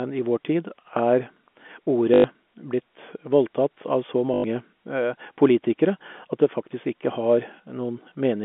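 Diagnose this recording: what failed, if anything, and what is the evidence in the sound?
A short robotic stutter with a buzz at 2.14 to 2.24 s and 4.34 to 4.44 s, right after "voldtatt av så", points to network packet loss with the last packet repeated. Each 100 ms gap, which fits five 20 ms packets, was filled by looping one packet out of step with the pitch.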